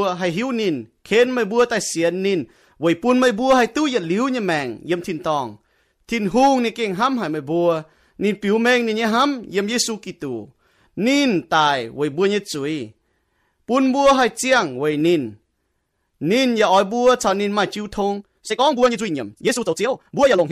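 From 18.08 s to the end, a time-stretched section runs at double pace with unchanged pitch, likely squeezed by software; faster playback would raise pitch, so it sounds rushed instead.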